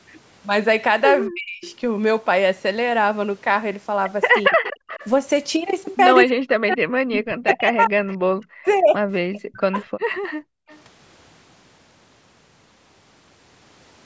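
Speech here, passed through call microphone processing with nothing above 8 kHz, and it shows speech suppressed in double talk: the voice drops by roughly 40 dB at 1.29–1.65 s, 4.48–4.6 s and through much of 6.26–10.22 s, likely the echo canceller clamping down while the far side spoke. There's also an echo leak, a copy of the voice returning about 230–240 ms late at 1.64–1.72 s, 4.63–5.09 s, 8.1–8.14 s and 10.68–10.78 s, likely residue the canceller missed. Finally, the background is gated by the echo canceller at 10.5–10.68 s, with the room sound dipping about 40 dB before returning.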